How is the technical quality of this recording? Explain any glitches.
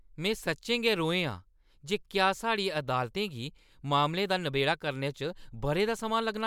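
No glitches turn up anywhere in this recording. It's just the speech as recorded, with nothing breaking in to get in the way.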